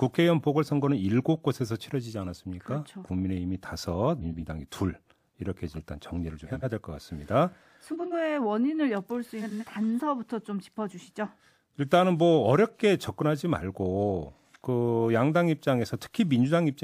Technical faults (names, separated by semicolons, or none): frames out of order